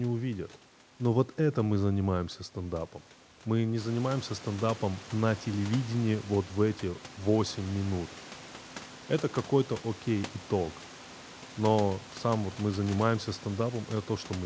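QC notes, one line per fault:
No technical faults are present: the room's background noise rises by about 11 dB at around 4 seconds and stays about 20 dB below the speech, and the call path's codec coding leaves nothing above 8 kHz, consistent with a wideband call codec such as G.722 at 64 kbps.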